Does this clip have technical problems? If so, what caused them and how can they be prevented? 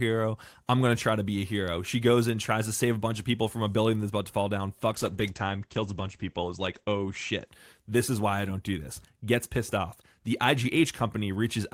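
Yes. A call bitrate drop runs from 4.92 s, after "about to fall down", to 7.53 s, before "this is why I". A falling bandwidth estimate pushed the encoder from 32 to 12 kbps and cut audio bandwidth from 20 kHz to 8 kHz, so the sound turns muffled and coarse. A higher minimum bitrate prevents it.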